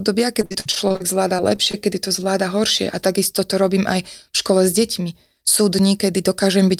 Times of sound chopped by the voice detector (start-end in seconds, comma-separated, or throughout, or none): none